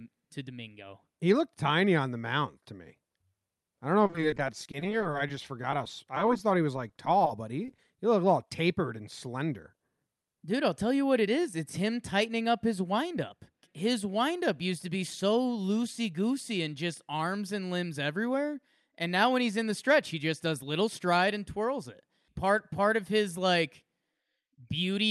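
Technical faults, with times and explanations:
4.04 to 7.85 s, repeated packet loss (robotic sound): packets kept going missing or arriving late, leaving dozens of holes of up to 30 ms. Each was patched by extending the previous sound, so the speech turns choppy until "he looked".
13.14 to 13.71 s, jitter buffer speed-up: after "him tightening up his", the receiver held excess buffered audio and trimmed small pitch-period slices, roughly 40 ms in all. The speech runs about 6% faster at unchanged pitch, sounding briefly hurried.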